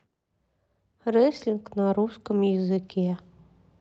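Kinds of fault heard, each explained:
Clock drift between sender and receiver, throughout: the sender's clock runs roughly 5 percent fast, so the receiver's jitter buffer keeps overfilling and must discard audio.
Repeated timing corrections, 0.07 to 3.26 s: the receiver repeatedly trims short pieces to keep pace, running at 105 percent speed.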